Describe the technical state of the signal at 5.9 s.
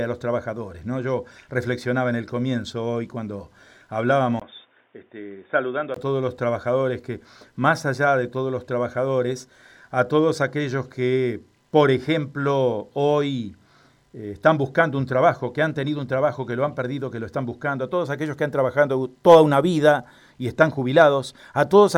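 At 5.9 s the sound is dull and boxy, with nothing above 3.6 kHz, about 5 dB quieter, and sitting on a new background noise roughly 40 dB below the signal. This stretch runs from 4.40 s to 5.96 s and opens with a 20 ms gap. The likely cause is an input switched to a poorer device mid-recording: the replacement device passes a narrower band and brings its own level and noise floor until the original input returns.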